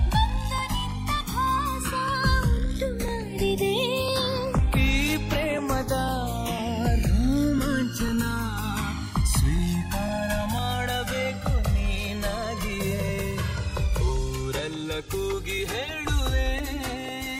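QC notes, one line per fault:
Throughout: channels drifting apart. Heard in mono, the sound takes on a slow, sweeping flange that keeps shifting in colour as the comb notches glide through the spectrum. The two channels appear to come from devices on separate clocks, one running roughly 200 ppm off the other. So the delay between them keeps growing, reaching something like 3 ms by the end, and the summed notches never settle.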